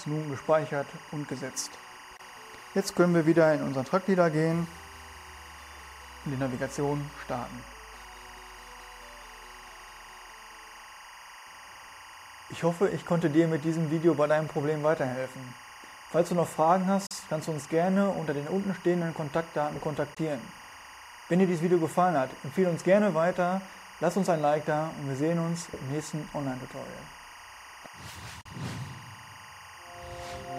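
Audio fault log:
throughout: timecode bleed, a steady chirping warble near 1 and 2 kHz about 20 dB below the sound, leaked square-wave code at 23.976 frames per second.
2.17 s, 17.06 s, 20.14 s, 28.41 s: Bluetooth dropout, abrupt silent holes of 19, 37, 19 and 37 ms; playback resumes further on, likely from one or two dropped packets.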